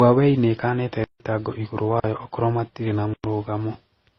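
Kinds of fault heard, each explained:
Transcoding between lossy codecs: The speech sounds dull, with nothing above 6 kHz. Several kinds of smearing and warbling artefact are heard together. This likely comes from passing through successive low-bitrate lossy codecs, each encoding the previous one's damage and adding its own.
Block of digital silence: The speech drops out and returns with no fade. There are three holes: 1.04 to 1.2 s (160 ms), 2.0 to 2.04 s (40 ms), and 3.14 to 3.24 s (104 ms).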